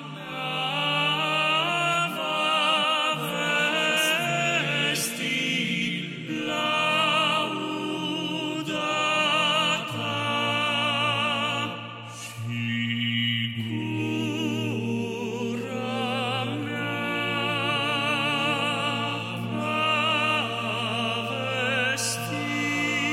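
Nothing stood out as a technical problem on listening.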